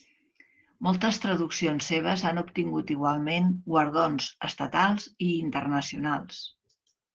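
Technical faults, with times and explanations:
Throughout: Opus voice compression. The speech has nothing above 11.4 kHz, and its excitation is coded coarsely, leaving it plainly muffled, hoarse and slightly robotic. This fits the SILK linear-prediction mode at around 12 kbps with 20 ms frames.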